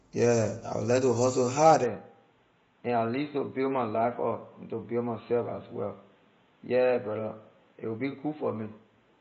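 From the start, the speech sounds rough and grainy. There is a hiss-like fill between the voice's harmonics, and nothing reaches above 7.7 kHz. This is likely low-delay AAC compression, the AAC-ELD type used on video calls. Its short frames cannot separate pitch harmonics cleanly, and they spend bits quickly. The damage is plainly audible here, which fits a low bitrate of around 24 kbps.

At 1.84 s, the input switched to a poorer device, likely a different microphone or a headset's call profile. There is no gap at the change. The band narrows at once, and nothing above 4.1 kHz is left, so the voice turns dull and boxy. The level drops by about 5 dB. A new background noise appears, roughly 40 dB below the speech. This state lasts to the end of the clip.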